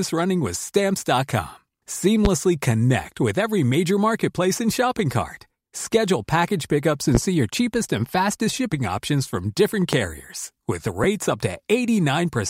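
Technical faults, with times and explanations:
2.25–2.28 s, 7.15–7.18 s, 9.93–9.96 s: loud pop, three single pops each about 30 ms long, before "connect with every major", between "package pickups" and "see your cheapest and", and after "shipping options from different". Peaks are about 20 dB, 15 dB and 20 dB above the speech, which continues underneath. The likely cause is a voltage step or spike from a plug, switch or static discharge, shaped by the downstream circuitry into a sharp thump.
11.04 s: lost LE Audio frames, a 7.5 ms gap consistent with one missing LC3 frame. The decoder fills it by repeating the previous spectrum with randomised signs, so the speech briefly turns into a short noisy smear rather than dropping to silence.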